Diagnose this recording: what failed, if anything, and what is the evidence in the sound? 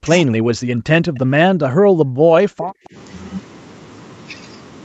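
The speech is suppressed in double talk from the start to 2.95 s, a call-processing fault at the echo canceller. The level sinks by roughly 40 dB at its deepest and recovers only after 2.95 s, most likely because the far end was talking at the same moment and the canceller ducked this talker along with the echo. Unlike a network dropout, the sound dips rather than cutting cleanly, and the fault spans about three seconds.

An echo leak appears from 1.15 to 1.19 s, again in call processing. A faint, brief copy of the sound comes back about 171 ms late, at about 35 dB below the speech, likely residual loudspeaker pickup that the canceller failed to remove. The fixed delay separates it from room reverberation, which decays smoothly from the direct sound. The band limit at 8 kHz from the call's microphone path is expected and does not contribute to either fault.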